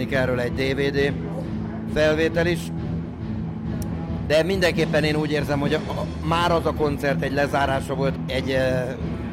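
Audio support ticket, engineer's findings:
Nothing stood out on listening; no symptoms to log against any component.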